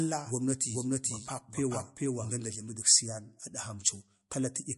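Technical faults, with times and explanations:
Throughout, MP3 compression: nothing is present above 11.3 kHz, and weak detail flickers in and out, giving a watery, swirly texture with smeared consonant onsets. This is likely lossy encoding starved of bits, and the damage level fits roughly 54 kbps.
0.0–2.3 s, doubled audio track: a second full-band copy of the speech runs roughly 0.4 s behind, at about equal level, with no added reverberation. It is already running when the clip begins and stops abruptly at 2.3 s, likely from two out-of-step copies being mixed.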